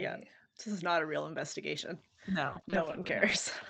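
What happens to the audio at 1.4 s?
A blemish on the disc wipes out more data than the error correction can rebuild, once per revolution. From 1.31 s to 2.02 s, the player patches those gaps, producing four CD scratch ticks: brief clicks, the longest under a millisecond.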